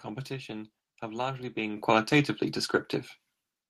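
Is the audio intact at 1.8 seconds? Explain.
No. At 1.77 s, after "have largely", the microphone volume steps up. The input gain rises about 9 dB at once, so speech and background jump together.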